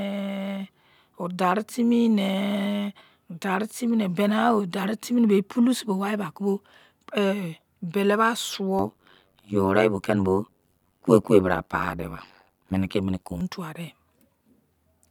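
Overlap-add ripple from 8.79 to 13.41 s: frames rejoined with mismatched overlap make the speech level pulse around 100 times a second, about 60 dB deep, a metallic buzz with extra tones around the voice.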